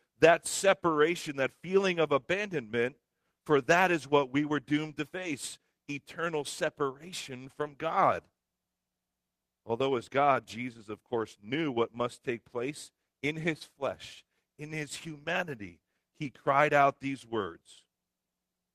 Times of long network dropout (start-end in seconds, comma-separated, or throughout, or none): none